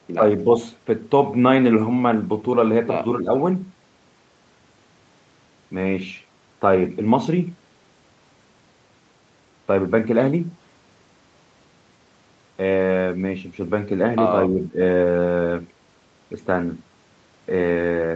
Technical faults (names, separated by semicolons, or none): speech suppressed in double talk